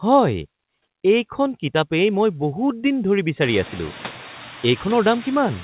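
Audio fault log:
throughout, noise suppressor artifacts: steady background is pulled down by about 8 dB in speech gaps and returns under words. A spectrogram shows the noise floor pumping with each word, strongest after the room noise rises about 23 dB near 3.5 s, all below the call codec's 4 kHz ceiling.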